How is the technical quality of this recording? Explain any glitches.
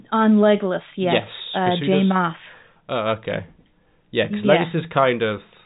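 No glitches or faults heard.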